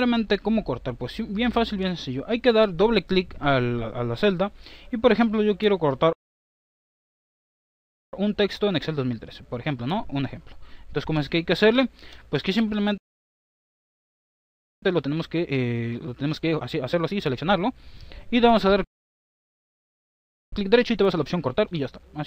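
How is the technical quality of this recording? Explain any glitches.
The technical quality is poor: playback repeatedly halts and then rushes to catch up, three times in total.

Playback stalls occur from 6.13 to 8.13 s, 12.98 to 14.83 s, and 18.84 to 20.53 s. Each time the audio cuts to silence in mid-flow, for about 2.0 s, 1.84 s and 1.68 s respectively. The cause is likely the player running out of buffered data, or its audio thread being blocked, so nothing reached the output until it recovered.

Time-compressed catch-up follows each stall: 8.13 to 11.13 s at 1.25 times normal speed, 14.83 to 17.83 s at 1.5 times, and 20.53 s to the end at 1.25 times. The sound is hurried but keeps its normal pitch. The player is shrinking the backlog built up during the silence by removing short slices and cross-fading across the joins.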